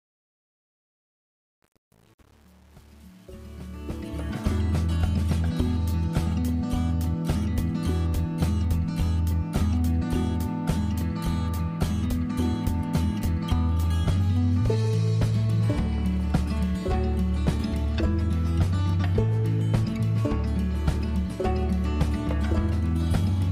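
The fade-in from 0.0 to 4.60 s keeps too few bits, consistent with an 8-bit stage without dither. This truncation distortion on the fade leaves the sound gritty until 4.22 s.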